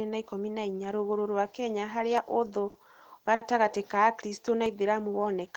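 At 2.18 s the speech skips forward with no pause, a brief piece of roughly 15 ms simply gone. It repeats at 4.66 s, 2.5 s later. That regular spacing points to audio missing between chunks, likely lost as a recorder closes one 2.5 s block and opens the next.

Between those, from 2.70 to 2.77 s and from 3.35 to 3.43 s, a sound is instead held too long, by 50 ms and then 60 ms. These are short stalls from a late packet: the jitter buffer ran dry, the last sound was stretched until the packet arrived, and playback resumed with nothing missing. A stall drags the sound out, whereas a chunk gap cuts part of it away.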